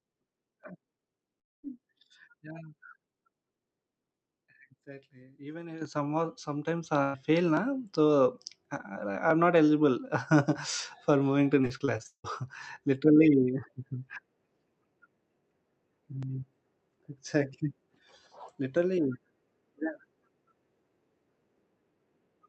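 From 1.39 to 1.65 s, the sound is stretched into a fading buzz or hiss and then falls silent. It resumes with about 240 ms missing, most likely a long network dropout.

At 5.82 s, a microphone volume step-up occurs: the call software raised the input gain in one jump, so voice and background rise together by about 8 dB.

At 6.84 s, a second microphone volume step-up adds about 3 dB. Again, voice and background level shift together at the same instant.

From 7.03 to 7.16 s, a burst of packet loss drops about 120 ms. The receiver continues the last sound and fades it down before the audio resumes further on.

From 11.62 to 12.26 s, repeated packet loss opens seven gaps, the longest 171 ms. Concealment patches 44 percent of the span, producing choppy sound with about 300 ms missing.

Throughout, the Opus call path limits the audio to an 8 kHz bandwidth.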